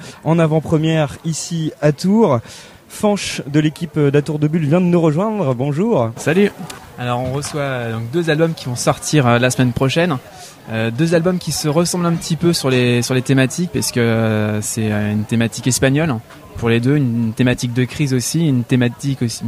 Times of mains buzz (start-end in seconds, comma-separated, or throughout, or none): none